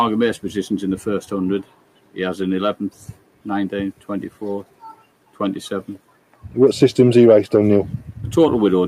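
A noise suppressor built for speech was left running on this non-speech audio. It treats steady, sustained content as background noise and pulls it down while leaving sudden onsets largely intact. As a result, the level of the sound keeps swinging by about 10 dB across the clip instead of following the material itself. The same processing produces distinct episodes of sound cut by the noise suppressor, where it judged a passage to be noise and lowered it further than the rest: 1.63 to 2.17 s, 2.91 to 3.46 s, 3.93 to 4.09 s, 4.64 to 5.40 s and 5.98 to 6.43 s. The deepest drop is about 11 dB in the 3.93 s episode and about 12 dB in the other four. The longest episode, near 4.64 s, affects roughly 0.7 s of audio.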